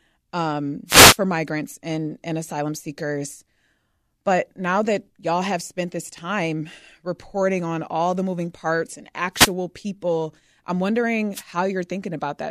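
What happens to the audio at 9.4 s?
The wireless microphone's radio signal fades as reflections cancel, so receiver noise surges from 9.34 to 9.52 s: a wireless microphone noise hit. After "the moving parts and", a short burst of static swishes over the speech, easing before "people I'm".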